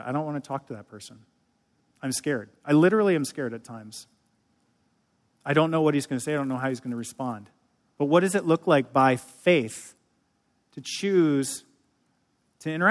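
Right after "what he's going to", from 6.18 to 7.96 s, the speech picks up a 100 Hz buzz. That's the resampler restarting on every block. The 10 ms blocks were each converted on their own, which fits a 48 kHz to 24 kHz halving. At each block edge the filter had no real neighbouring samples, so every edge leaves a small error. Those repeating glitches fuse into a buzz that rides on the speech.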